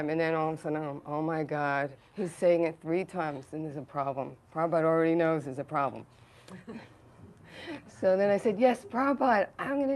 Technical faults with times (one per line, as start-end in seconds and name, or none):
none